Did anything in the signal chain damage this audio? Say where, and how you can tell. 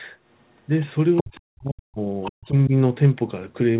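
Yes. The other side's voice leaks through at 0.81 to 0.85 s as a barely audible scrap, then much more clearly from 1.16 to 1.36 s and again from 2.23 to 2.46 s, about 10 to 15 dB below the talker's level. This points to the call-processing stage. The likely cause is the talker's device playing the far end on a loudspeaker while its echo canceller failed to strip that signal from the microphone feed.

Speech is suppressed in double talk from 1.22 to 2.01 s, where the talker's voice drops very deeply, by around 40 dB, partly overlapping the leaked voice. A milder dip of about 10 dB follows from 2.31 to 2.73 s, again overlapping the leakage. Both fall in the same call-processing stage. The likely mechanism is the echo canceller's suppressor, unable to tell near-end speech from echo, attenuating everything at once.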